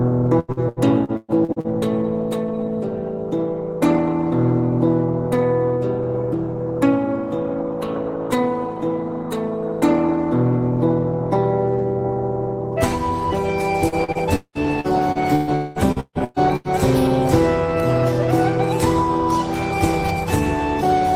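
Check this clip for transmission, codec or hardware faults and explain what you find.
Yes, there are transmission faults: three bursts of repeated packet loss and one short stretch that sounds like a network dropout.

Repeated packet loss (robotic sound) occurs from 0.39 to 1.67 s, 13.88 to 15.50 s and 15.92 to 16.68 s. The audio turns choppy, with pieces missing. Holes keep opening in the stream, and each is papered over by stretching the last good sound before the next hole arrives. About half a second is patched in each of the first two bursts, with gaps up to 194 ms long. In the third burst more than half the span is concealed.

Between 15.55 and 15.79 s the sound smears into a fading buzz or hiss for about 0.2 s and never drops to silence. The audio then comes back without the part that was lost. The likely cause is a long network dropout. For that 0.2 s nothing arrived, so the receiver kept extending the last sound, and the missing audio was lost outright rather than delayed.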